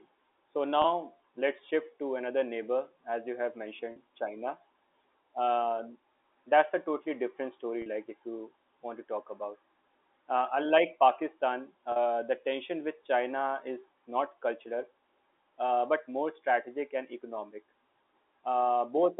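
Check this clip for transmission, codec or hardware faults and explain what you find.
Four short dropouts are audible, all bridged by concealment, heard through G.711 telephone coding with its narrow line band.

Packet loss with pitch repetition occurs at 0.82–0.84 s (20 ms), at 3.92–3.96 s after "neighbor as you have", at 7.82–7.86 s between "a totally different story" and "like if you want", and at 11.92–11.96 s before "the tension with" (40 ms each). The receiver loops the last pitch period across each gap, which fits one or two lost 20 ms packets. The result is a brief held, buzzy tone.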